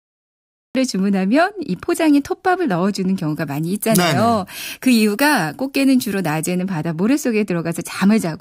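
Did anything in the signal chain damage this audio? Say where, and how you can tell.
Yes. The first fault is a cut-off start at the capture or storage stage, where recording began late. The file holds digital silence until 0.75 s, and the speech then starts abruptly mid-sound with no natural attack. On the waveform there is a flat line that jumps straight to signal, with a vertical edge at 0.75 s.

The second fault is pre-emphasis left on, in the transmission or playback chain. From 3.29 s to 6.59 s the speech turns thin, bright and hissy on sibilants. That fits an FM-style 50 µs treble boost whose matching de-emphasis was never applied, leaving 10 kHz about 10 dB hotter relative to 1 kHz. The spectrogram shows the upper band noticeably brighter for exactly that span. The waveform looks spikier there, dominated by high-frequency detail.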